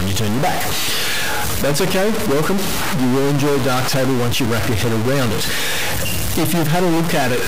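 A stuck bit runs through the whole clip, from start to finish. The likely cause is one bit of the sample data held at a fixed value by a broken line or converter, so roughly half the samples are pushed off by a step of around -15 dBFS, which points to a fairly high-order bit. The result is a harsh, buzzy distortion tracking the waveform, and the pauses fill with a loud hiss because the stuck bit flips with the sign of small values.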